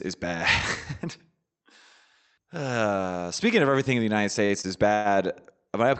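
At 4.45 to 4.52 s, and again at 4.61 to 4.66 s, the speech briefly hangs: a sound is held a little too long with a faint buzz or dip, then carries on with nothing skipped. These are short stalls from a late packet. Each time the packet was not there when due, the jitter buffer emptied, and the receiver stretched the last sound, by about 39 ms and then 20 ms, until the packet arrived and playback resumed from the same point.

From 4.94 to 5.08 s there is a longer hold, a call audio freeze. The last sound is drawn out into a fading buzz or hiss for roughly a tenth of a second without dropping to silence, and then the speech picks up where it stopped, so a gap has been inserted rather than anything lost. The likely cause is packets held up in transit, so that the jitter buffer ran dry and the receiver had to fill about 104 ms until they came through.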